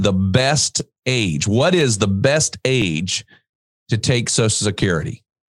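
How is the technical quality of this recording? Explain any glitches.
There's a recurring glitch: overlapping chunks at 0.80, 1.81 (just before "the best"), 2.82 (right after "the best") and 4.83 s. About 6.5 ms replays at each 1-second join, so you hear a small repeating click.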